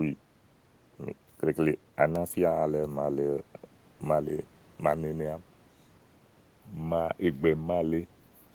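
No technical faults detected.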